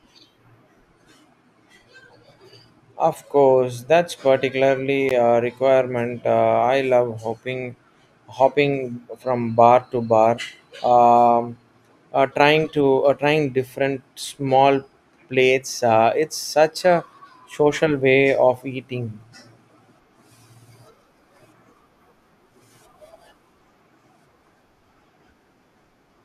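At 5.09 s the speech drops into a brief silence of about 15 ms, a gap at a join of encoded pieces, where untrimmed encoder delay and end padding were left between segments.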